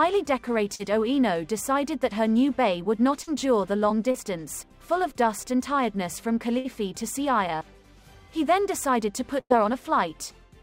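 Right at 0.75 s, then again at 3.23 s and 4.11 s, there's short concealed packet loss. About 40 ms never arrived each time, so the decoder stretched the preceding sound over the hole and blended back in, which you hear as a quick smear or wobble. Later come two bursts of packet loss, about 60 ms missing at 6.58 s and about 100 ms at 9.40 s. The receiver held the last sound and let it fade, so there's a stretched buzz or hiss, and then the audio jumps ahead past what was lost.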